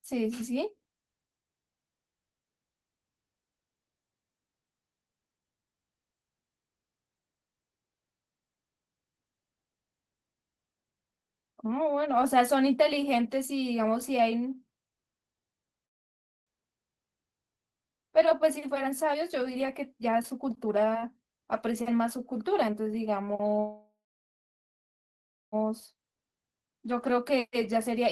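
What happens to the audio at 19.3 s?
At 19.3 s you're in the middle of a jitter buffer speed-up that runs from about 17.89 s to 22.32 s. The receiver's buffer had built up more audio than it wants, so it kept snipping out tiny chunks a pitch period or so long to catch up. The speech plays at about 114% speed with the pitch unchanged, so it sounds hurried, and roughly 0.7 s of audio is lost over that stretch.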